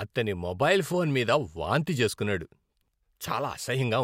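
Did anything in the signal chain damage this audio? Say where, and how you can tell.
Yes. Right after "ఫోన్ మీద వాంతి చేసుకున్నాడు", from 2.7 to 2.88 s, there are chunks out of order. That stretch sounds jumbled. A 60 ms block plays two chunks late, after the audio that should follow it, which points to buffer or packet reordering in the driver or network stage. The spectrogram shows formant tracks jumping backward at the three hard joins. The waveform shows abrupt discontinuities there.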